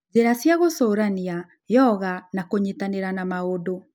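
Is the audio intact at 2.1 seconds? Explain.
Yes, at 2.1 seconds the speech plays through intact, with no dropout, click, distortion or other fault.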